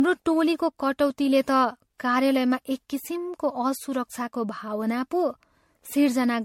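Generation loss runs through the whole of this speech clip, start to finish. It has a swirly, smeared, hollow quality, with consonant attacks blurred, and nothing above 16.5 kHz. The likely cause is repeated lossy MP3 coding, something like half a dozen or more passes at a rate that fits roughly 64 kbit/s. Each pass quantises the signal again on a shifted frame grid, so the noise and spectral holes pile up.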